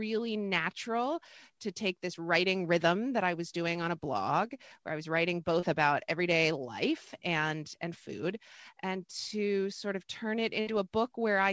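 A short concealed packet loss occurs at 5.60 to 5.65 s, between "where I was writing" and "about everyday life and". About 30 ms of the call arrived too late to be decoded. The receiver covered the hole by extending the preceding sound for roughly 24 ms, following its pitch or noise character, then crossfaded back into the real signal. The result is a brief smear in the speech rather than a clean cut.

A burst of packet loss follows at 10.60 to 10.70 s, just after "to sort of turn". Here about 60 ms of consecutive audio went missing. Concealment stretched the last received sound across roughly 63 ms and lowered its level as the gap went on, producing a short held sound that fades before the speech picks up again further along with that stretch absent. The speech has no content above 8 kHz, consistent with a G.722 call path at 64 kbps.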